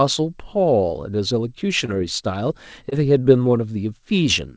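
Short concealed packet loss at 1.86 s and again at 2.90 s: about 20 ms of speech arrived too late, so the receiver extended the preceding sound and blended back, leaving brief smears. The call path's bandwidth stops at 8 kHz, consistent with G.722.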